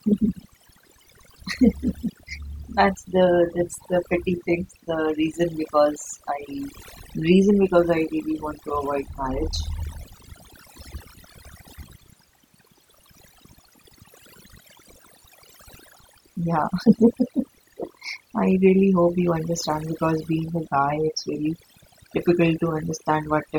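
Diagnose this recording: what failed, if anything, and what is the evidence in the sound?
Overdone noise removal at the call-processing stage runs throughout this speech. Gaps between phrases fall to near silence, dotted with twinkling specks. The suppressor was set too hard, so bands near its noise estimate vanish, taking quiet speech detail with them.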